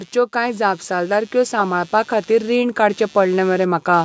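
Computer activity noise runs through the whole recording: a faint buzzing chirp, pulsing roughly 150 times a second and well below the speech, that follows the computer's load rather than the sound. From 0.14 s to 4.0 s, the automatic gain rising raises the level by about 8 dB. Speech and background swell together slowly, unlike a sudden volume jump.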